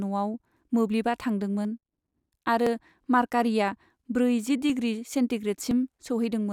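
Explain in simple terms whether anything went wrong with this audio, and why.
Yes. There are periodic USB or driver dropouts in this speech: from 0.64 s to 5.71 s, about a hundredth of a second of sound is skipped roughly once per second, leaving small ticks. Unlike random glitches, they are evenly spaced and are heard only while someone is speaking.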